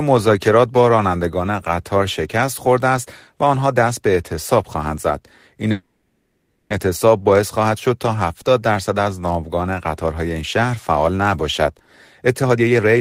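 At 5.71 s the speech stops advancing, and the last sound is stretched into a buzzy, hissing continuation that fades away, ending in about 150 ms of silence before the speech resumes at 6.72 s. This is a call audio freeze, likely caused by packets stalling in transit until the jitter buffer ran dry. The receiver filled the gap of about one second with synthesised sound. When the packets arrived, the speech picked up where it had left off. Nothing is lost, but everything after the freeze runs about one second later.

From 11.87 s to 12.99 s the speech sounds rushed, running at about 129% of normal speed with its pitch unchanged. This is a jitter buffer speed-up. Audio had piled up in the buffer beyond its target depth, so the receiver repeatedly cut out short slices of one or a few pitch periods. Roughly 0.3 s of audio is trimmed this way, which brings the delay back down.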